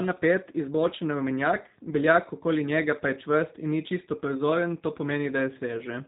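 Speech, passed through the G.729 codec throughout. Nothing survives above 3.8 kHz. Rebuilding from sparse pulses leaves it plainly rough and synthetic, which fits 8 kbit/s.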